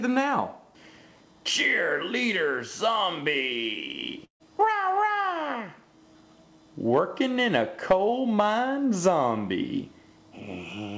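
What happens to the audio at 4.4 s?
At 4.25 s the sound smears into a held continuation of itself that fades out, leaving about 100 ms of silence before the audio picks up again at 4.43 s with about 150 ms of material missing. This is a burst of packet loss: packets were lost or arrived too late, so the receiver filled the roughly 148 ms gap by extending and attenuating the last sound before resuming further along.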